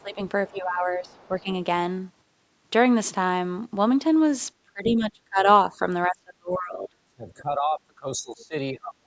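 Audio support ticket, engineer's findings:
Talker's speech dips and partly drops out in six places: 0.00–0.19 s, 0.51–1.48 s, 4.64–5.46 s, 5.71–5.82 s, 6.08–8.55 s, 8.71 s to end. Small dip at 5.71 s, about 5 dB. Deepest drops about 30–35 dB in the later stretches, gapping the speech for roughly 2 s within 6.08–8.55 s. Likely speech suppressed in double talk: the echo canceller could not separate the near talker from far-end echo while both spoke, so it attenuated everything.

A second, faint voice is audible under the talker at 1.05–1.28 s, about 35 dB down. It returns as a short, louder scrap at 4.84–4.90 s, about 15 dB down. Both land inside suppression windows. Likely the other side's voice leaking through: loudspeaker playback reached the mic and the canceller's residual left some far-end speech in the uplink. The mic chain's band tops out at 8 kHz.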